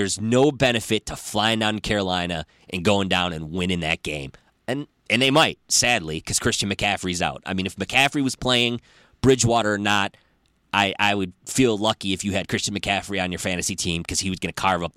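The speech recording carries no audible technical faults at any point. Nothing in it needs a time marked against it.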